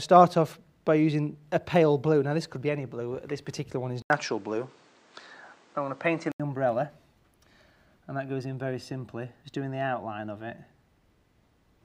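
At 4.02 s the sound drops out for about 80 ms and comes back duller and narrower, with nothing above 9.2 kHz. The level shifts by around 5 dB, and a new noise floor sits roughly 40 dB under the signal. It stays like that until 6.40 s, then opens back up. That pattern points to the input switched to a poorer device, likely a different microphone or a headset's call profile being picked up mid-recording for those couple of seconds.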